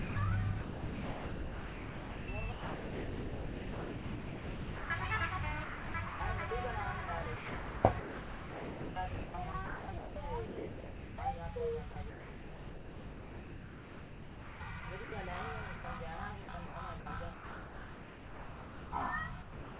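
A sender-side voice detector likely kept toggling transmission, so the audio is chopped by the voice detector from 0.0 to 4.9 s, 5.64 to 6.2 s, 7.06 to 11.18 s and 11.92 to 15.12 s. Quieter portions gave way to synthetic comfort noise, roughly 4.2, 0.4, 2.8 and 2.6 s respectively. At 15.76 to 15.84 s the detector likely treated sound as background and stopped sending, dropping 80 ms that was filled with steady comfort noise before the sound returned. Chopping resumes from 16.42 s to the end, replacing about 2.2 s. Throughout, nothing is heard above 4 kHz, which fits a narrowband call codec.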